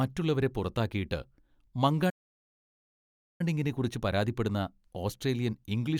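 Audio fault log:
2.09–3.41 s, playback stall: the player was likely starved of data or had its output thread blocked, so nothing reached the output for about 1.3 s. The speech breaks off in mid-flow into dead silence, then carries on once playback recovers.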